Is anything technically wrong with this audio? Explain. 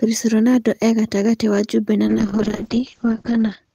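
Yes. From 2.08 s to the end there's a call bitrate drop: the encoder gets squeezed from 32 kbps to 8 kbps, bandwidth falls from 20 kHz to 8 kHz, so the speech goes muffled and rough and watery for the last 1.5 s or so.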